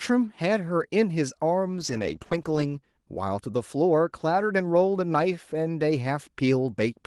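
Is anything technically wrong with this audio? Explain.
Yes. There is a call bitrate drop from 1.72 to 2.89 s. The speech turns rough and watery, and it loses its brightness. The change fits the encoder falling from about 32 kbps to about 13 kbps, staying at the bottom for about 1.07 s. The call's bandwidth estimate fell, so the codec was told to spend far fewer bits. It codes the signal more coarsely and trims the top end. Clarity returns once the rate recovers.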